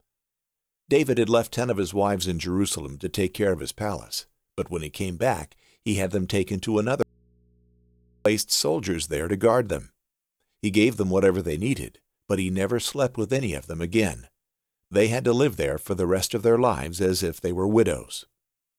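Audio dropout to a faint residue, 7.03 to 8.26 s: the speech cuts out abruptly, leaving only mains hum about 40 dB down, likely from a momentarily broken input connection.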